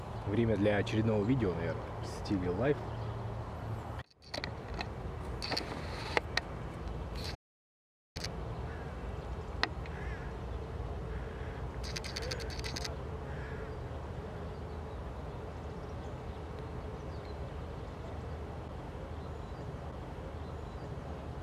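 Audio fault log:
7.35–8.16 s, audio dropout to silence: the sound cuts off mid-flow and resumes 0.80 s later. The gap is silent with no room tone, unlike a noise gate or fade, which leave some floor or taper. The input was likely lost while writing continued.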